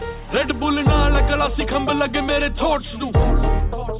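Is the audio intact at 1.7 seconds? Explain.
Yes, the audio at 1.7 seconds is intact, with no dropout, click, distortion or other break in the signal at that moment.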